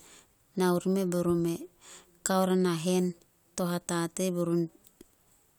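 No technical faults are audible.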